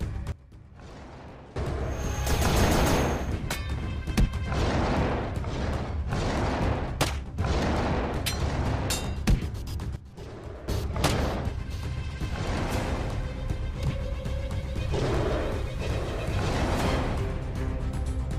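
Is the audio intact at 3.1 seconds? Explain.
Yes, the audio is intact at 3.1 seconds, with no dropout, click, distortion or other fault audible at that point.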